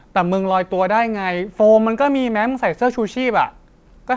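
Nothing goes wrong anywhere in this speech, which arrives over a call line where the sound stops at about 8 kHz, just as you'd expect from a wideband codec like G.722.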